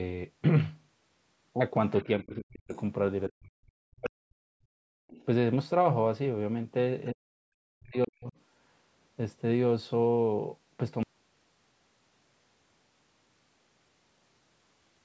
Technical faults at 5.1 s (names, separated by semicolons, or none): background gated by the echo canceller; other side's voice leaking through